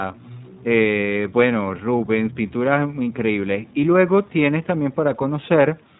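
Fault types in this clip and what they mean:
iLBC codec: The speech is cut off above 4 kHz and sounds plainly rough and synthetic. This roughness, rather than muffling alone, sets it apart from a simple low-pass filter. Each 20 ms frame is coded independently, and the damage fits roughly 15 kbps.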